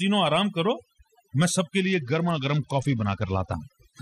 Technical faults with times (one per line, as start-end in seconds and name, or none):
0.00-4.01 overdone noise removal
1.81-3.53 Bluetooth SBC bit pool drop